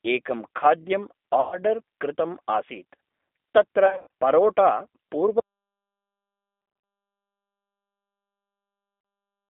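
Throughout, the speech sounds narrow, rough and slightly synthetic, confined to roughly 250 Hz to 3.6 kHz. That points to the G.729 codec at 8 kbit/s rebuilding the speech from a crude vocal tract model.

At 1.41 to 1.58 s, 3.86 to 4.07 s, 6.62 to 6.84 s and 9.01 to 9.05 s, the sound smears into a fading buzzy tone or coloured noise. This is VoIP packet loss concealed by the speech codec, which extrapolates from the last good frames. The lost audio totals about 110 ms, 170 ms, 130 ms and 40 ms. The second and third gaps are scattered over about 260 ms and 220 ms.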